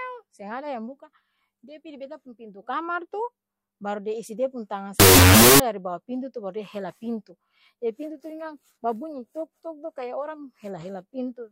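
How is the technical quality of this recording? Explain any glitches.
The recording has one clear glitch, a short burst of corrupted audio in the middle of the clip.

Wrong sample width, 5.00 to 5.60 s: 16-bit samples read as unsigned 8-bit split each value into two bytes. This produces loud noise over buried speech at half speed and lower pitch, just before "dari bawa pintu tu".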